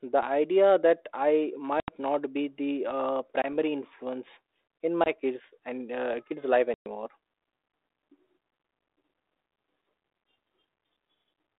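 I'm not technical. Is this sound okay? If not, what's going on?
No. The speech cuts out in short, sharp gaps at 1.8 s (after "the idea that i"), 3.42 s (before "influence in"), 5.04 s (after "influence in") and 6.74 s, then returns with brief roughness. This is packet loss on an ADPCM call. Small pieces of the phone signal went missing, and the receiving end briefly lost track of the sound before settling again.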